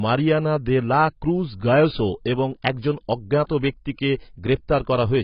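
Heavy AAC compression, likely AAC-LC at a low bitrate around 16 kbps, runs through the whole speech clip. The encoder cuts everything above 5.5 kHz, leaving the voice dull and smeared, with a warbling, fizzy texture on sustained sounds and sibilants.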